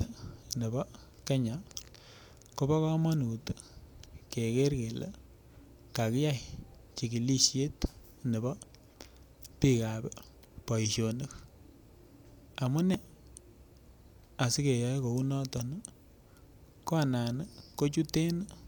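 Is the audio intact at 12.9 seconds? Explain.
No. At 12.94 s there is a brief stretch of damaged data in a compressed stream. Part of the encoded data at that point is corrupt, so the decoder misreads the affected frame, loses its place in the bitstream and has to hunt for the next valid frame header before normal decoding resumes. The disruption lasts only a few milliseconds and comes through as a short chirp or blip cutting into the speech.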